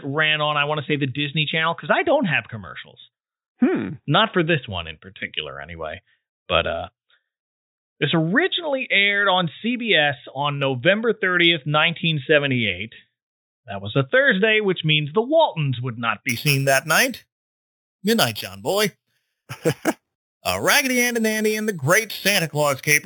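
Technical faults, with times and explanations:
16.29–23.05 s, imaging from sample-and-hold upsampling: to the end, the speech gains a bright metallic fizz about 10 dB below it, mainly from 4 to 8 kHz. Samples were repeated without smoothing, which fits 8 kHz audio raised to 44.1 kHz, leaving mirrored spectrum copies that track the speech.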